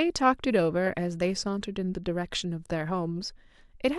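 No technical faults can be heard anywhere in the recording.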